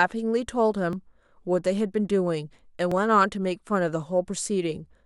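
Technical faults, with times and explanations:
0.93 s and 2.92 s, overlap between stream segments: you get a tiny skip in the speech at each of these points. The time stamps of neighbouring segments overlapped, so the player trimmed the overlap out, but that audio wasn't actually duplicated. Roughly 10 ms and 7 ms of real signal simply disappear, and the waveform jumps across the gap. The two skips sit about 2 s apart, which fits 2-second stream segments.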